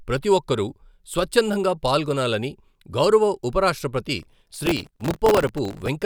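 Processor overload crackle runs from 4.20 to 5.88 s in this speech clip, starting right after "స్వచ్ఛందంగా పాల్గొనాలని గౌరవ ఉపరాష్ట్రపతి". Around a hundred very short buffers, each roughly 1.5 ms, miss their deadlines, and each repeats a hard-edged scrap of old audio, forming a gritty tearing crackle.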